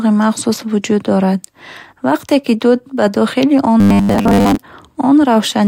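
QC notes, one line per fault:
3.80–4.57 s, robotic sound from repeated short buffers, after "дуд ба дохили он": speech becomes a rigid metallic buzz near 100 Hz, likely from a 10 ms slice repeating while most real audio is skipped.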